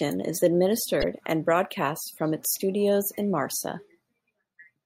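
At 1.00 to 1.04 s and again at 4.53 to 4.55 s the speech breaks into a short glitch, typical of damaged data in a compressed stream: corrupted bytes make the decoder misread those frames and lose sync before locking onto a later frame header.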